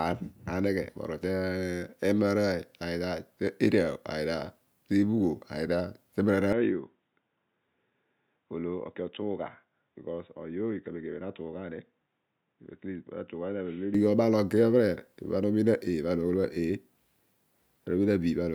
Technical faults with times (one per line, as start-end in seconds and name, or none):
6.53-13.94 input switched to a poorer device